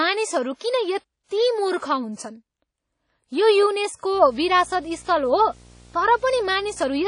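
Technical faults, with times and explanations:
Throughout, WMA compression: the speech carries a ringing, washy quality with hiss that swells and fades with the signal, and there is nothing above 10.1 kHz, which fits a low bitrate near 32 kbps. The likely cause is a transform codec with long blocks, spreading quantisation noise across tens of milliseconds and zeroing weak spectral lines. Unlike a single pre-echo, this damage is plainly audible all the way through rather than tied to one attack.
0.56 to 0.61 s, pre-echo: a short hiss runs for 50 ms just before a sharp attack, and the attack itself sounds softened and smeared. The attack fell late in a transform block, so noise sized for the loud onset was spread evenly over the whole block, including the quiet moment before it. What sets it apart from a click or dropout is that the noise comes before the attack, not at or after it.
4.13 to 7.07 s, video or display buzz: a steady buzz at 59.94 Hz with hash above it appears and continues to the end, together with a very high line-rate tone at 15.7 kHz, sitting about 25 dB below the speech. 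A screen or video cable is coupling into the audio path. The 59.94 Hz field rate and the 15.7 kHz tone distinguish it from mains hum, which would sit at 50 or 60 Hz with no such high tone.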